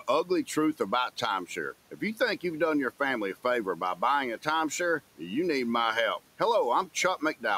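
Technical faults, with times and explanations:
1.91–2.2 s, speech cut by the noise suppressor: just before "you've done your family", the suppressor mistakes a quiet stretch of speech for background and pulls it down by up to about 10 dB, around a tenth of a second in all, so the sound goes faint and swallowed. Unlike a dropout, it is never true silence, and the room noise, about 24 dB below the speech, dips along with it.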